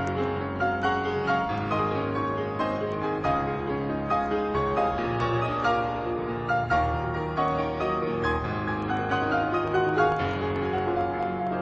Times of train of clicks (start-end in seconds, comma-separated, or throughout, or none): 9.68-11.48